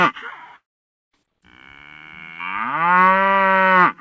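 From 0.56 s to 1.14 s the audio stops arriving for roughly 0.58 s, most likely a long network dropout. The receiver first extends the last sound as a brief, fading buzz, then leaves about 0.52 s of silence before the signal resumes at 1.14 s with the missing stretch simply gone. Across the clip, the top end stops at 8 kHz, consistent with a G.722 call path at 64 kbps.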